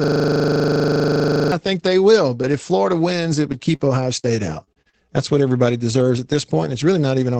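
System hang loop from the very start to 1.52 s: a 40 ms slice of this speech recording repeats 37 times, a frozen buffer cycling at 25 Hz that sounds like a buzzing stutter. Short concealed packet loss at 3.75–3.81 s and 4.19–4.32 s: about 40 ms goes missing each time and is bridged by extending the preceding sound, leaving a brief smear, with the second patch stretching timing by roughly 10 ms. A lost packet rebuilt from error correction at 3.79–3.81 s and 4.23–4.25 s: each 20 ms frame is replayed from a low-bitrate backup copy, so it sounds rougher and noisier. Repeated packet loss (robotic sound) from 4.64 to 5.02 s: four gaps, the longest 35 ms, are each patched, with about 41% of that span synthesised, giving a choppy texture with pieces missing. All of this travelled over an Opus call path whose audio band stops at 8 kHz, consistent with a codec running at around 20 kbps.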